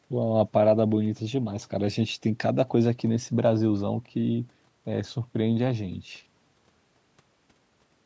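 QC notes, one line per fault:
No fault found: the speech has passed through a call's microphone processing, whose high-pass filter trims the lowest bass and whose band reaches no higher than 8 kHz, both of which are expected for that path.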